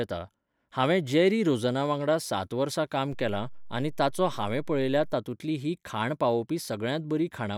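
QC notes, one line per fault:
3.13 to 5.14 s, DC step: the zero line jumps by about -37 dBFS and later steps back, so a low thump marks each edge while the speech continues unchanged.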